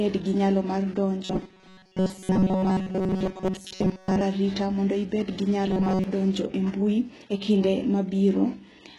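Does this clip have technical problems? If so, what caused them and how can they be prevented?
Yes. Throughout, the speech is likely affected by HE-AAC compression. The rebuilt treble sounds gritty and lispy rather than simply dull, which fits a bitrate near 12 kbps. Encoding at a higher bitrate prevents this.

From 1.25 to 4.22 s, between "gi nyalo mar" and "arita mondo", and again from 5.66 to 6.04 s, there is robotic sound from repeated short buffers. Most of the audio is replaced by a loop of about 5.3 ms, which forces a fixed 188 Hz buzz regardless of the speaker's pitch. That fixed pitch distinguishes it from a codec's warble. It is likely caused by audio arriving late, and larger buffers or a steadier connection prevent it.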